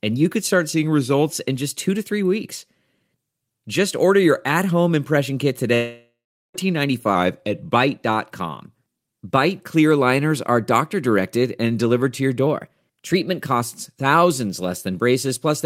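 It's a speech clip with three brief speed-and-pitch lurches, likely a drift correction step each time: slowed about 6% and roughly a semitone flat at 0.74–1.28 s (after "and you could start") and 7.15–7.75 s, then sped up 6% and a semitone sharp at 12.47–13.46 s (after "and delivered to your"). After "at home impression kit", 5.75–6.56 s has a fading buzz or hiss, then about 0.4 s of silence, standing in for 0.8 s of audio that was lost, likely a long network dropout.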